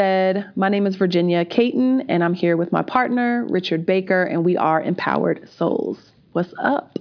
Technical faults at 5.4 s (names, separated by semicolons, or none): none